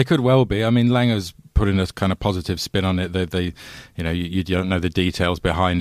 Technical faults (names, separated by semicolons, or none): none